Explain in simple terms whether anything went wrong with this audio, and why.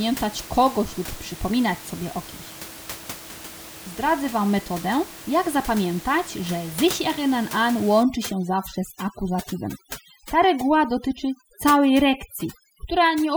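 From 8.03 s, right after "że sich erinnern an", through to the end, there's overdone noise removal. The noise reduction was turned up too far, so any slice of the sound that sits close to what it thinks is background hiss gets pushed way down or cut out, including the quieter parts of the speech. The room noise there drops and breaks up into little twinkling specks.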